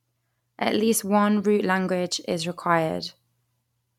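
Nothing in this bit of speech stands out as a technical fault, so there's nothing here to flag.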